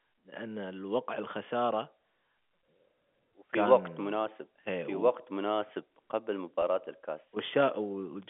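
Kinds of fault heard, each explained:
Channel delay (comb filtering), throughout: one channel arrives a few samples late, under a tenth of a millisecond, and the mono sum cancels toward a first notch near 7 kHz, so the upper speech band sounds slightly dull and hollow.
Packet loss with pitch repetition, at 6.62 s: about 10 ms of audio goes missing, which points to a single lost packet. The receiver fills the gap by repeating the last pitch period, heard as a brief, faintly held, buzzy catch in the voice.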